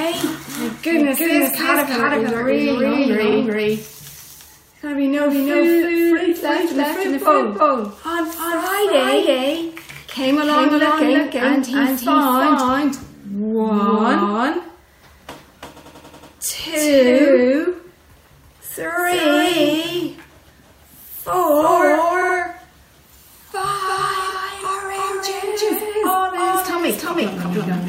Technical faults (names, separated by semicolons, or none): doubled audio track; repeated frames